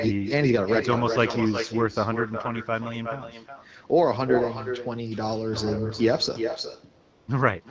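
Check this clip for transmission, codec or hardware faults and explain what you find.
Two faults are audible in the speech: an echo with no canceller running through the whole clip, and a short stretch of AMR comfort noise near the end.

Echo with no canceller, throughout: every phrase is trailed by a fainter, thinner copy of itself, roughly four tenths of a second later and about 7 dB below the direct speech. At the far end the call is playing from a loudspeaker, its microphone captures that playback, and nothing subtracts it. The talker's own audio returns after the network round trip, shadowing everything said.

AMR comfort noise, 7.01 to 7.27 s: for about 260 ms the real background is replaced by a smooth, even hiss that switches in and then out again. The sending phone decided the talker had gone quiet and stopped transmitting speech frames. The receiver then generated synthetic noise from a rough description of the background's level and spectrum. 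That is why the texture changes abruptly rather than fading naturally.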